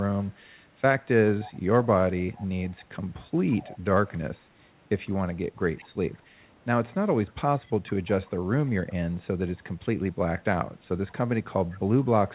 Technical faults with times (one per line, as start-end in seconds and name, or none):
1.29-2.47 echo leak
3.50-3.78 echo leak
5.58-5.88 echo leak
7.27-8.11 echo leak
8.89-8.93 echo leak
11.09-11.13 echo leak
11.71-12.05 echo leak